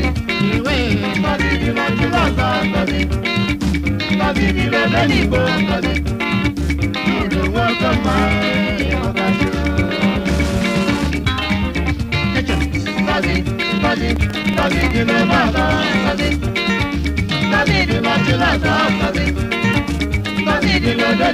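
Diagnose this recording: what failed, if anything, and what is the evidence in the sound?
The failure is buffer tearing at the driver or buffer stage, from 14.12 to 14.93 s. A rattling buzz at 21.5 Hz, which fits a 2048-sample buffer, marks where writer and reader cross. About 2% of each period repeats audio from roughly a tenth of a second earlier, with hard joins.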